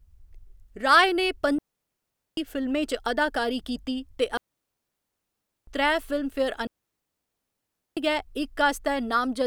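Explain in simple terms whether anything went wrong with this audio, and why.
Digital wireless dropout cuts the speech to clean silence three times: 1.59 to 2.37 s, just before "फिल्में च अदाकारी कीती"; 4.37 to 5.67 s, right after "च अदाकारी कीती ते"; and 6.67 to 7.97 s. The wireless link lost data, so the receiver muted without any crackle.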